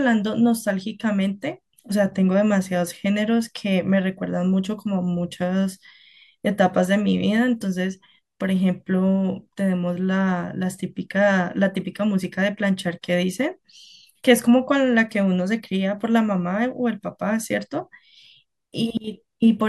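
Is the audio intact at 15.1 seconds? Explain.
Yes, at 15.1 seconds the speech plays through cleanly, with no dropout, click, distortion or other fault.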